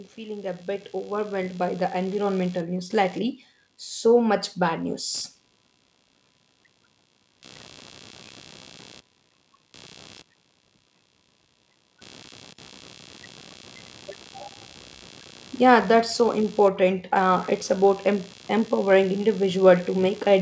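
From the start and through the whole clip runs computer activity noise: a buzzing, chirping texture pulsing at around 70 times per second, some 25 dB below the speech. It follows processor and peripheral load shifting the shared audio ground, not the speech itself.

Between 0.15 and 2.45 s, just before "news lately", automatic gain rising lifts the level by about 10 dB. The gain control judged the input too quiet and raised it gradually, so speech and background swell together over those two seconds.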